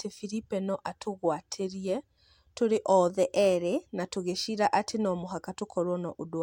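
From 3.1 s to 3.88 s there is a drift correction step, likely from clock-matching software that abruptly raised the playback rate to drain its buffer rather than easing it back into line. The speech runs 6% fast for about 0.78 s, so its pitch rises together with its tempo by 101 cents, roughly a semitone. The voice sounds suddenly hurried and sharp, then snaps back to normal speed and pitch at 3.88 s.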